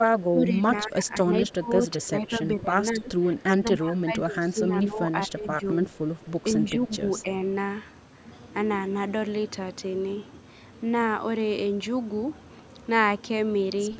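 From 0.1 to 2.77 s, then 2.93 to 3.12 s, 3.62 to 5.78 s, 6.6 to 7.02 s and 7.22 to 7.29 s, the speech dips and breaks into pieces, by up to about 20 dB at first and about 10 to 15 dB later. This is speech suppressed in double talk, likely an echo canceller ducking the near talker while the far side spoke. Unlike dropouts, the loss is partial and uneven, not clean silence.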